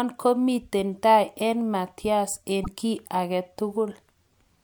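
At 2.63 s the speech breaks for about 50 ms, until 2.68 s. It is a short glitch, and the speech resumes slightly further along than expected. The likely cause is a broken MP3 bit reservoir. Frames seem to have been lost. The following frame then reached back for borrowed data and found unrelated bytes. The span matches two frames of about 26.1 ms, which fits that picture.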